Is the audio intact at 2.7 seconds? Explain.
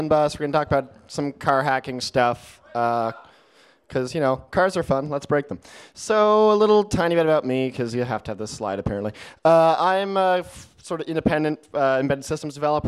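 Yes, the audio is intact at 2.7 seconds, with no dropout, glitch, distortion or other technical fault at that moment.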